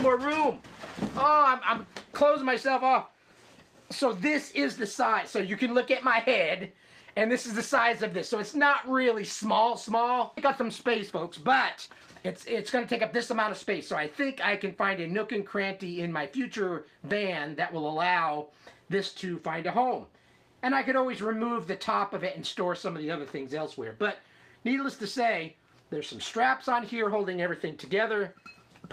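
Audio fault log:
10.37–10.39 s, skip ahead: Playback jumps forward with no gap filled in. About a second of audio is missing, likely dropped when the buffer overflowed with later audio already waiting. The two sides of the jump butt together almost directly.
10.47–13.64 s, jitter buffer speed-up: The audio runs about 8% fast while pitch stays the same. After the jump, the buffer still held more than its target, so short pitch-period pieces were cut repeatedly. Roughly a third of a second is removed, and the passage sounds hurried.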